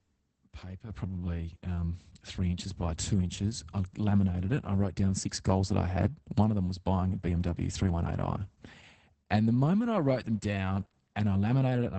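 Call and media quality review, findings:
Opus voice compression throughout: muffled, hoarse, robotic speech; spectrogram blank above 8.7 kHz. Sound points to SILK wideband near 10 kbps with coarsely coded excitation.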